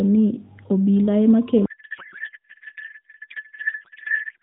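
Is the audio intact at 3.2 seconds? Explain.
No. At 3.2 seconds the speech has dissolved into garbled noise and warble that barely tracks it. This is a codec payload misread, running from 1.66 s to the end at 4.42 s. The AMR frames appear to be packed octet-aligned but unpacked as bandwidth-efficient. Every field is shifted, so the decoder builds sound from misplaced parameters until the clip ends.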